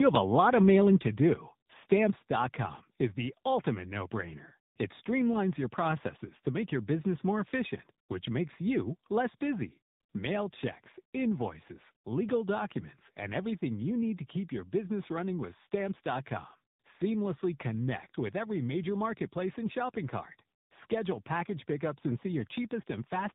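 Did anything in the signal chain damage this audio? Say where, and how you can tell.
Yes. Tandem speech coding at the codec stage runs throughout. The speech is rough, muffled and warbly, with nothing above 3.8 kHz. That points to two speech coders in series, ending in low-rate AMR-NB.

Microphone overload at the converter, from 0.15 to 0.18 s: a harsh crackle where peaks run about 3 dB past full scale and flatten, likely from excessive input gain.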